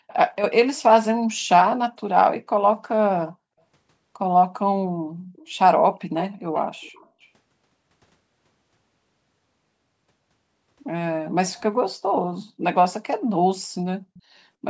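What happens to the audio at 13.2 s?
Nothing goes wrong at 13.2 s: the speech carries on intact through the call's microphone processing, with no dropout, glitch or distortion at that point.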